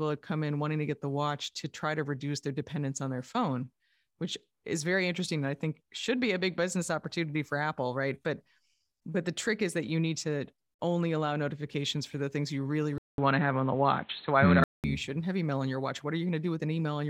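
At 12.98 s the speech drops out for 200 ms, then returns dull and boxy, with nothing above 4.2 kHz, a level shift of roughly 5 dB and a new background noise well beneath it, until 14.84 s. The likely cause is the input switching to a poorer device.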